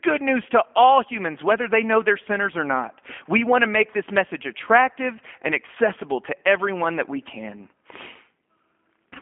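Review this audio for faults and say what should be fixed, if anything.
Throughout the speech, the sound is narrow and telephone-like, with nothing above about 3.7 kHz and the band running roughly 200 Hz to 3.5 kHz, and plainly audible codec roughness gives it a synthetic edge. That is G.729 codec damage, consistent with G.729A at a rate that fits 8 kbit/s: the decoder rebuilds each 10 ms frame from a vocal tract filter, a pitch predictor and a few coded pulses instead of the original waveform. Record or transport the speech through a wideband codec, avoiding G.729 on any leg of the path.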